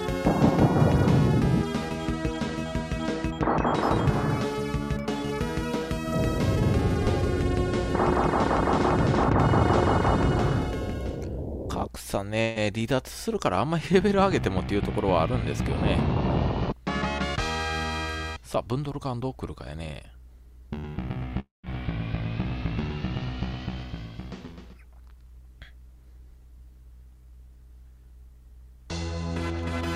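The audio has two gaps where the sound stops moving forward. At 12.41 to 12.58 s a burst of packet loss holds the last sound for about 140 ms as a buzz or hiss that keeps fading. When the audio picks up again, roughly 140 ms of material has been skipped. The fill never reaches silence, and that short, unbroken concealment is what sets it apart from the later fault. At 21.40 to 21.65 s the sound again freezes into a fading continuation, but this time it dies away completely, leaving about 150 ms of silence before playback returns with about 240 ms missing. The longer span and the audible fade to nothing fit a long network dropout, likely a stretch where no audio arrived at all rather than a handful of lost packets.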